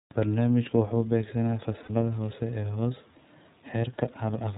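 Speech, and the whole clip has gone through the iLBC codec, so it's narrowband telephone audio with nothing above 4 kHz and a slightly rough, synthetic grain throughout. The coding damage is plainly audible rather than subtle. iLBC codes each frame's excitation on its own, and the texture here fits its 30 ms frame mode at around 13.33 kbps. Then there are lost iLBC frames at about 1.83 to 1.90 s, right after "wuxuu beegsanayaa" and before "hoose ee". For that stretch the decoder fills the hole by repeating the last pitch cycle mixed with a bit of noise, so you hear a brief held, buzzy vowel instead of the real sound. The length fits two dropped 30 ms frames, roughly 60 ms of concealment. Because each iLBC frame stands alone, the speech snaps back cleanly as soon as real packets arrive again.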